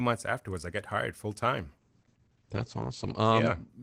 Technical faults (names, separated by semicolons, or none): call bitrate drop